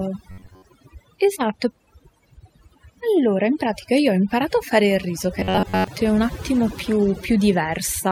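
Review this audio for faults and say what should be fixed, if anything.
Overdone noise removal affects the whole clip. Frequency bands near the noise floor are pushed down or cut entirely, so quiet parts of the voice go with them. On a spectrogram, the background looks nearly black, with scattered bright specks. To prevent it, lower the noise reduction strength and let some of the residual noise through.

Robotic sound from repeated short buffers occurs at 0.31–0.64 s and 5.40–5.88 s. In both spans the speech turns into a rigid buzz at about 94 Hz. This is likely caused by a chunk of roughly 11 ms being replayed in place of most of the real audio. On a waveform, the spans show identical repeating cycles. On a spectrogram, they show evenly spaced harmonic lines. To prevent it, keep audio delivery steady, for example with a larger buffer, so playback never has to repeat old audio.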